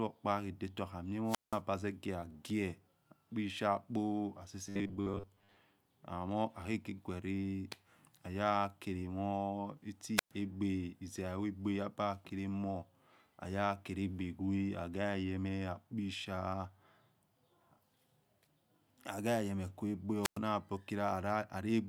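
Speech suffers three wireless microphone squelch dropouts, at 1.25–1.61 s, 10.16–10.31 s and 20.22–20.39 s. Each time the radio link fades, hiss swells, then the receiver mutes for about 180, 115 and 105 ms. The waveform shows a flat gap and the spectrogram a blank column preceded by broadband noise. From 4.67 to 5.58 s the sound turns into a rigid metallic buzz at 100 Hz, likely from short buffers of about 10 ms being repeated, with about half the audio replaced. On a spectrogram this appears as evenly spaced horizontal harmonic lines.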